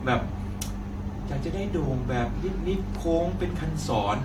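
Swirly, hollow and smeared across the whole of this short speech recording, consonant attacks blur and a watery, phasey texture sits under the sound, with nothing above about 19.1 kHz. This is generation loss, likely from the audio being decoded and re-encoded with a lossy codec several times, roughly four passes. The character fits repeated AAC encoding at around 96 kbit/s, each pass requantising on a shifted frame grid so the noise and spectral holes compound.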